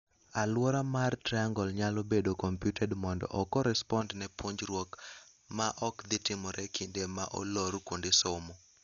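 From the start, the speech sounds dull and rough, with fluttering noise around tones, likely from heavy Dolby Digital compression, consistent with about 48 kbps. A spectrogram shows a hard ceiling at 7 kHz with speckled, noise-filled bands below it. From 4.01 s to the end, pre-emphasis is left on: the treble boost was never undone, so that section sounds thin, bright and sibilant, about 11 dB stronger at 10 kHz than at 1 kHz, which fits a J.17 curve. On the spectrogram the upper bands brighten abruptly at 4.01 s, and the waveform grows spikier.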